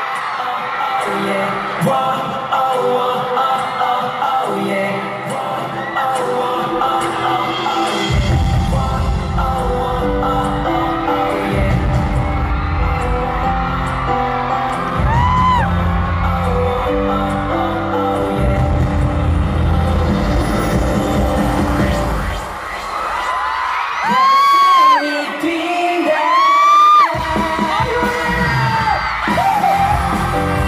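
Nothing in this audio stands out as a technical fault; there's nothing to point to at any moment along the way.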